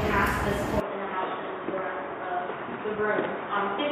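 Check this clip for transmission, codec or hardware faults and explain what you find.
One fault: from 0.8 s to the end, the input has likely switched to a poorer device, a narrower-band microphone or headset path. Nothing passes above 3.8 kHz, so the sound turns dull and boxy without any gap, drops roughly 10 dB in level, and picks up a faint new background noise well beneath it.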